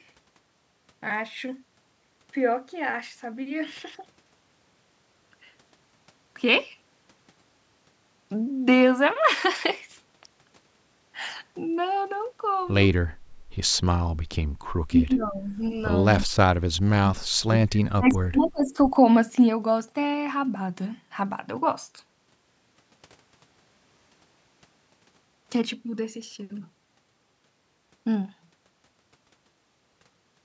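A speech recording, band-limited at 8 kHz by call microphone processing. From 13.22 to 13.52 s the room background is gated by the echo canceller, dipping by about 19 dB while the far end plays. The talker's voice then dips from 14.89 to 15.58 s, by around 15 dB, and cuts out far deeper, roughly 40 dB, from 16.17 to 18.78 s. This is likely speech suppressed in double talk. Faint delayed copies arrive at 15.24–15.29, 16.21–16.26 and 18.45–18.50 s, 287 ms behind the original and well below it in level, likely an echo leak from a loudspeaker.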